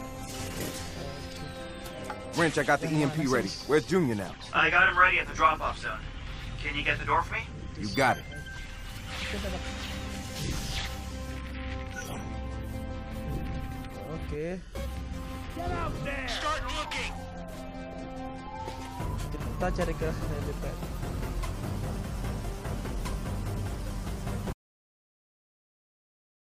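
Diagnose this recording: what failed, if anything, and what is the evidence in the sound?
Audio dropout to silence at 24.53 s, lasting to the end: a likely lost input link left the recorder writing silence, a flat waveform line and blank spectrogram.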